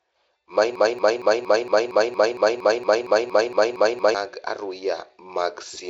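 From 0.76 s to about 4.1 s there's a broken-record loop: one 231 ms snippet repeats back to back fifteen times, likely a stalled stream resending its last fragment.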